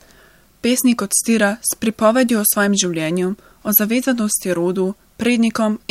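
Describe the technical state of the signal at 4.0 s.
The speech signal at 4.0 s is intact, with no dropout, glitch, clipping or other audible fault at that moment.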